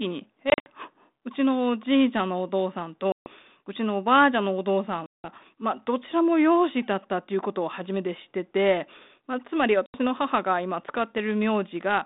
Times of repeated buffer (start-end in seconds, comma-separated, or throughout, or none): none